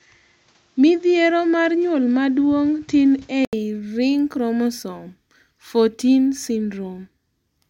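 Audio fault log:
0.00–3.53 s, input switched to a poorer device: the speech is duller and boxier, with nothing above 7.8 kHz and a faint background noise well beneath it, then an 80 ms silence at 3.53 s before full-band sound returns at the same loudness. This is likely a change of microphone rather than a filter or codec bandwidth drop, because the tone and noise floor change together at a single cut with a gap, rather than only the top end narrowing.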